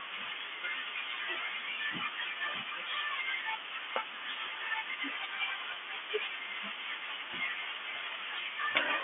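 At 5.74 to 5.76 s there's a packet loss with pitch repetition: about 20 ms of audio went missing, which fits a single lost packet. The receiver filled the gap by repeating the last pitch period, so you hear a brief, slightly held buzz over the narrow G.711 telephone band.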